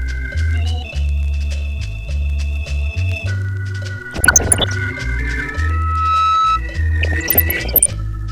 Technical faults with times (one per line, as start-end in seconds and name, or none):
4.11-4.73 DAB burbling
5.41-6.61 loudspeaker feedback squeal
6.99-7.90 DAB burbling